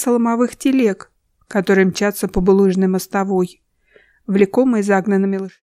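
Nothing here needs fixing, and the only change in level is a smooth fade-out that begins at around 5 s and settles by 5.63 s, just as an editor would shape it.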